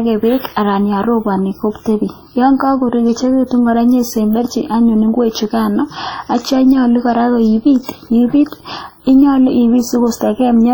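A speech recording with heavy codec damage throughout: ringing, washy speech and hiss that breathes with the signal, likely from WMA compression at a low bitrate near 32 kbps. A spectrogram would show smeared onsets and patchy holes where weak components were zeroed.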